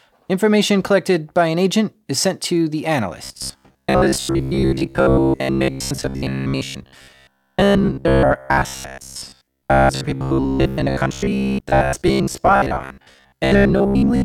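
From 3.24 s to 14.24 s, the speech turns into robotic sound from repeated short buffers. A rigid metallic buzz near 66.8 Hz is heard, likely from about 15 ms chunks being repeated most of the time.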